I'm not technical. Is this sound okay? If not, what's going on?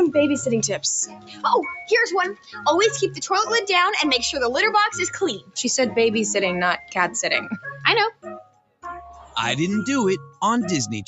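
No. A noise suppressor made for speech was left on, so this is a case of a noise suppressor applied to music or sounds. Throughout the clip, it treats steady, held sound as unwanted noise. The level keeps swinging, and the sound pumps and thins out.

There are also five clear moments of sound cut by the noise suppressor: 1.06 to 1.44 s, 2.34 to 2.59 s, 5.38 to 5.58 s, 8.12 to 8.84 s, and 9.13 to 9.36 s. Each one lasts well under a second. The sound sinks noticeably, with the deepest dip around 8.12 to 8.84 s.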